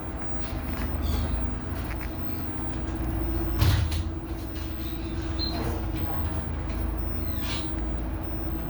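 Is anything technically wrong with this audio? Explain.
No, nothing technically wrong can be heard in this recording of sounds. There is no point anywhere in it where a fault becomes audible.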